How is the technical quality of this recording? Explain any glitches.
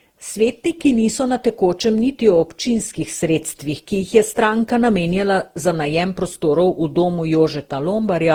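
The speech is degraded by generation loss throughout. From start to finish it sounds swirly, smeared and hollow, and consonant attacks are blurred. The likely cause is repeated lossy re-encoding, about ten passes, consistent with Opus near 48 kbit/s. Each pass requantises on a shifted frame grid, so noise accumulates.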